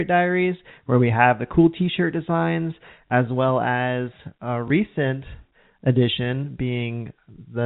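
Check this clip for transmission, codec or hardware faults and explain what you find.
Two brief transmission glitches are audible on a telephone-band speech path whose G.711 coding leaves nothing above 4 kHz. Packet loss with the last packet repeated occurs at 3.08 s and 4.68 s. Each time, roughly 20 ms of audio went missing, which fits a single lost 20 ms packet, and the receiver replayed the previous packet instead. Because the repeat seldom lines up with the voice's pitch cycle, each one sounds like a small blip. A dropout would leave a silent gap instead.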